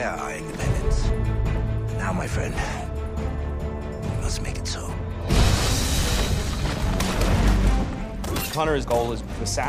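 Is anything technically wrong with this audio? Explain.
No, nothing technically wrong.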